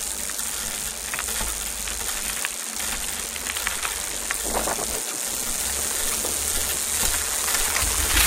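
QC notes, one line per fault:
1.76–7.97 s, clock drift buffer slips: a brief click recurs every 2.07 s, around four in total, each a discontinuity of a few samples. Likely two devices on independent clocks about 100 ppm apart, so the buffer periodically drops or repeats a sample block.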